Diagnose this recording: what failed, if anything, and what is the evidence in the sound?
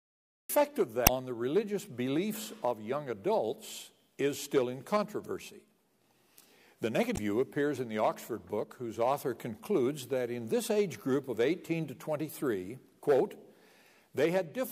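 The cut-off start is a capture or storage problem: recording kicked in late. There's digital silence up to about 0.49 s, then the sound jumps in mid-way with no attack or fade, so whatever came before that point simply wasn't captured.

Then there's damaged data in the compressed stream, a codec-stage fault. Around 1.03 to 1.09 s you get a short glitch, roughly 56 ms. The decoder hit corrupted frames, lost sync and hunted for the next valid header before recovering.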